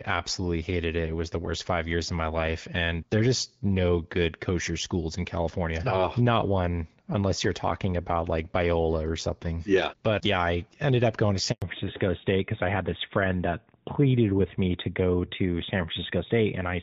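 A handover gap opens at 11.52 s, right after "ended up going to", and lasts 100 ms, until 11.62 s. The call is being passed from one network to another, and no speech frames reach the receiver while the switch completes. The sound dies away almost instantly and the line goes silent for that tenth of a second, so whatever followed those words during the switch is simply missing from the audio.

A fallback to narrowband follows from 11.62 s to the end of the clip. Before the handover, the speech has the fuller, brighter quality of AMR-WB (HD Voice), with light coding damage at a rate that fits 12.65 kbit/s. On the new link the call drops to AMR-NB at what sounds like 12.2 kbit/s, and nothing above 4 kHz survives. The voice abruptly turns duller and boxier, with the crispness of sibilants and consonants gone and a rougher texture.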